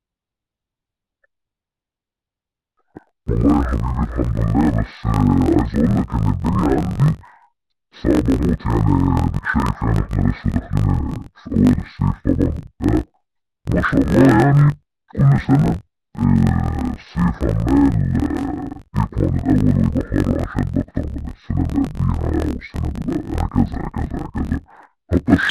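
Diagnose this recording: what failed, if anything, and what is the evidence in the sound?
The fault sits at the sample-format conversion stage: interleaved audio read as planar, present throughout the speech. Each block of alternating left and right samples is split so that its first half feeds one channel and its second half the other, so every half plays at half speed. The speech drops an octave and sounds doubled and choppy, with a rough pulse near 46.9 Hz, which fits blocks of about 21.33 ms, likely 1024 samples. A sample-rate mismatch would also lower the pitch, but it would slow the pace too. Here the timing stays correct.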